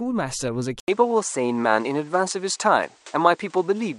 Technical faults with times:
0.80-3.98 input switched to a poorer device

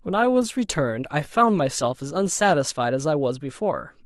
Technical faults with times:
0.00-2.56 adaptive stream starting at a low bitrate

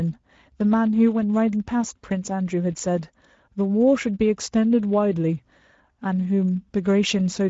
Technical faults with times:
0.00-7.49 Speex codec

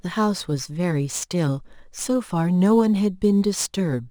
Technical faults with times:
0.00-4.11 crude rate conversion

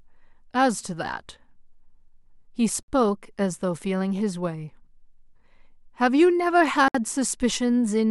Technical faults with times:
2.83-2.88 gap at a join of encoded pieces
6.88-6.94 gap at a join of encoded pieces

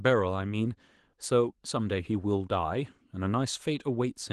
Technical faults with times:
none

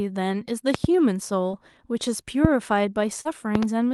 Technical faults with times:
0.74-0.87 loud pop
1.51-1.55 short concealed packet loss
2.45-2.47 loud pop
3.21-3.27 short concealed packet loss
3.55-3.65 loud pop

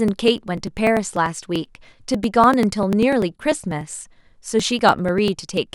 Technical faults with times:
0.08-5.67 periodic USB or driver dropouts

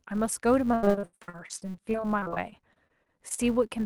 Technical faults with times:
0.00-3.86 filter restarted on every block
0.71-3.40 repeated packet loss (robotic sound)

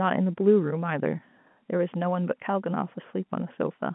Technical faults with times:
none

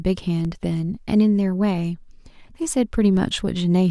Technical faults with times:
0.45 DC step
3.17 DC step

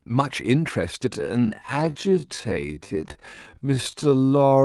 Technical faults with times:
1.07-4.65 time-stretched section

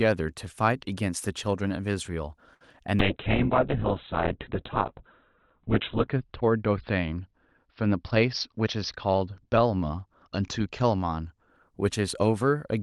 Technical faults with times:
2.54-2.61 short stall from a late packet
2.72 short concealed packet loss
3.00-11.56 call bitrate drop
7.86-8.68 jitter buffer speed-up

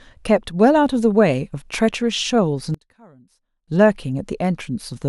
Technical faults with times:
2.74-3.68 one channel inverted

